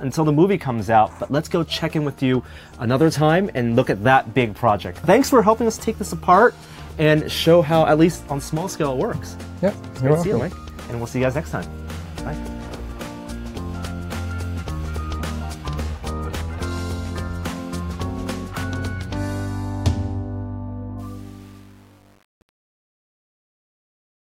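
From 20.99 s to 24.23 s the fade-out drops bits without dither, fitting an 8-bit path. This truncation distortion on a fade turns the tail gritty.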